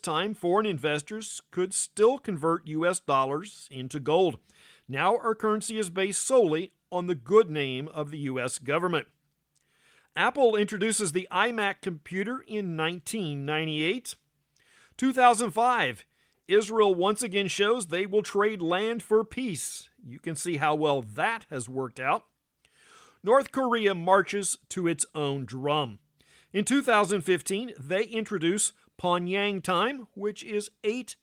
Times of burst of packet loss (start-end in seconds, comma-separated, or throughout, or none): none